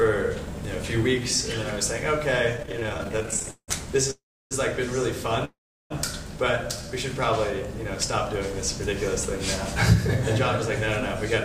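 From 2.57 to 3.70 s there's a stutter, repeated stalls. Packets kept arriving late, so the buffer ran dry 27 times, with gaps up to 173 ms, and the sound drags and hiccups. At 4.11 to 4.53 s and again at 5.45 to 5.92 s, the audio freezes: the last sound hangs, fades, then goes quiet for about 0.3 to 0.4 s before resuming with nothing lost. It's likely an emptied jitter buffer. At 6.77 to 6.93 s, a jitter buffer slow-down stretches about 39 ms in, playing at 81% speed, so things sound briefly drawn out.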